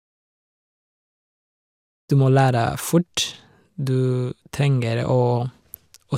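Nothing stood out on listening to this speech clip, whose level rises in a smooth fade from around 2 s to 2.12 s with no click or hard edge.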